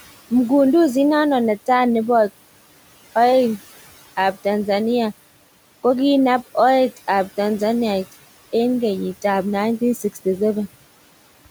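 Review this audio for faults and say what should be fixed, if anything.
Noise suppressor artifacts run through the whole speech recording: the suppressor pulls the background down by about 16 dB between phrases and lets it back up under speech, so the room noise, sitting about 19 dB below the voice, pumps audibly. A spectrogram shows the noise floor blinking on and off with speech and scattered isolated specks of leftover noise. To prevent this, use gentler suppression or fix the noise at the source rather than cutting it this hard.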